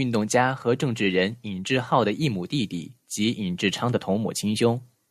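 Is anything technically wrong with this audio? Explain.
No, nothing technically wrong can be heard here.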